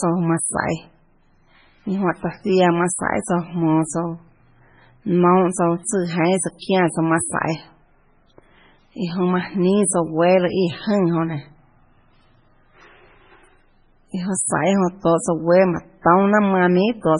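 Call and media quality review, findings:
Whole clip, start to end: watery, swirly speech with chirpy, metallic s sounds and smeared consonant onsets. Nothing above about 10.5 kHz. Likely MP3 compression, heavy damage, fitting a very low bitrate around 16 kbps. The encoder runs short of bits, hard-cuts the top end, and drops weak frequency lines that flicker frame to frame.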